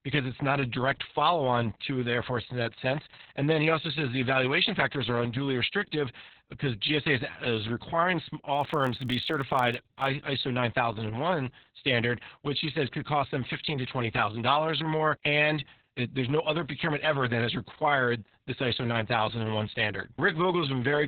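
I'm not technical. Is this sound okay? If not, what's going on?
No. Throughout, the speech was squeezed hard by Opus voice compression, which keeps only what it needs for intelligible talk and throws away everything above about 4 kHz. That leaves the voice muffled, hoarse and slightly robotic, like a poor phone line.

From 8.53 to 10.09 s, just after "is is requiring", there is a block size mismatch (padded). One stage handed over audio in chunks too short for the next, which fits a 1024-sample block, and the leftover space was filled with silence. Those tiny repeated gaps make a low buzz at about 47 Hz.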